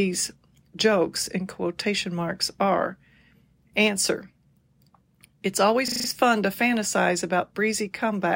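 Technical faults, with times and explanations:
5.88–6.08 s: system hang loop. The playback stalled and the hardware replayed one 40 ms chunk five times, giving a 25 Hz machine-gun stutter with almost no audio lost.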